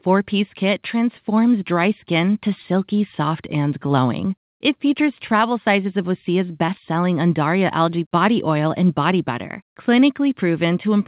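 At 6.66 to 6.70 s there's a short concealed packet loss. Around 20 ms of audio arrived too late to play, so the receiver extended the preceding sound for about 15 ms and crossfaded back, giving a quick smeared blip. The call path stays narrowband, with nothing above 4 kHz, which fits G.711 at 64 kbps.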